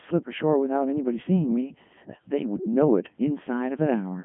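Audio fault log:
Throughout, Codec 2 vocoder: the speech comes out robotic and buzzy, because the decoder rebuilds it from sine waves driven by pitch, voicing, energy and a rough spectral envelope rather than keeping the real waveform. The damage is heavy, and everything sits in a narrow radio band of about 150 Hz to 3.4 kHz with nothing above 3.6 kHz. That fits Codec 2 running at its top 3.2 kbit/s mode.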